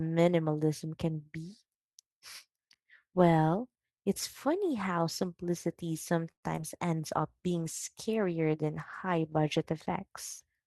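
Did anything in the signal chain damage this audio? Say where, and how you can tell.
Yes, the damage is in the network and codec stages of a voice call.

At 6.31 s the speech stops and the last sound is stretched into a short fading tail, then about 90 ms of silence, until 6.45 s. The speech resumes exactly where it left off, so nothing is lost, but everything afterwards runs about 119 ms later. That pattern is a call audio freeze, likely caused by delayed packets draining the receiver's jitter buffer, which filled the wait with extended sound and then silence.

Just after, at 6.55 s and again at 6.59 s, there are two back-to-back brief smears, each replacing about 20 ms of speech. This is short concealed packet loss. Those packets never reached the decoder in time, so it extrapolated from the preceding sound for a few milliseconds and cross-faded back into the real signal. The result is a wobble rather than a clean dropout.

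From 7.03 s to 10.36 s the speech turns rougher and duller. This is a call bitrate drop in the Opus encoder, from 32 kbps down to 18 kbps, with the lowest rate held for about 2.75 s. With fewer bits the codec quantises more coarsely and trims high-frequency content, which causes the watery, muffled quality. It clears once the rate recovers near the end.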